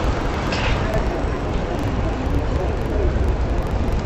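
Interleaved audio read as planar throughout: every 42.67 ms block, fitting 2048 samples, plays an octave low, doubled and choppy, stuttering at 23.4 Hz.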